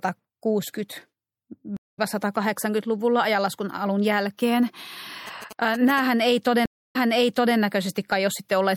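Throughout this speech recording, MP3 compression damage is plainly audible: the sound is watery and swirly, and s sounds carry metallic chirps. The encoder is likely starved of bits, at a rate that fits about 64 kbps, so it zeroes weak frequency lines that flicker on and off between frames. A stream reconnect at 1.77 s to 1.99 s drops the audio into about 0.21 s of silence. When the sound returns it has skipped roughly a fifth of a second ahead, because the player rebuilt its connection and started a fresh decoder mid-stream, and the first frame comes back muted or faded in. A second stream reconnect at 6.66 s to 7.57 s brings about 0.29 s of silence. This time playback resumes 0.62 s earlier, so material already heard plays again, consistent with the server resending a burst of buffered audio to the new decoder. GSM signalling bursts from 5.27 s to 6.00 s add a galloping dit-dit-dit of short buzzes repeating at 217 Hz, roughly 15 dB below the speech. 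A nearby 2G phone exchanging signalling radiates grouped radio bursts, and the audio circuitry rectifies them into that audible pattern.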